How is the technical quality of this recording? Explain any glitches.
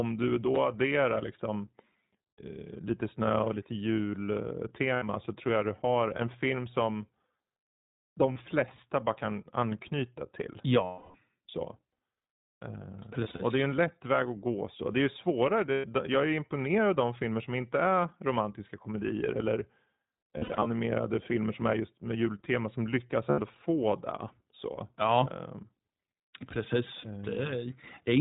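Quality is limited: the speech runs through a narrowband codec throughout and has eight short dropouts.

iLBC codec, whole clip: nothing above 4 kHz survives, so the speech sounds muffled and slightly rough and synthetic. That plainly audible coding damage comes from iLBC modelling each 20 ms frame's excitation independently, which fits its 15.2 kbps mode.

Lost iLBC frames: 2.33–2.41 s, 4.94–5.04 s, 8.32–8.38 s just before "flesta bara kan anknyta", 10.84–11.16 s right after "bara kan anknyta till" (the longest, about 300 ms), 13.20–13.41 s, 15.72–15.87 s, 20.38–20.71 s, and 23.30–23.40 s between "med jultema som lyckas" and "få det". The others run about 40 to 200 ms. At 13.20 s and 20.38 s the losses are scattered, with runs of about 70 ms at most. When packets go missing, the decoder repeats the last pitch cycle blended with noise, so each gap sounds like a held, buzzy or breathy vowel that fades over the longer losses. 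Because frames stand alone, the voice is right again almost immediately afterward.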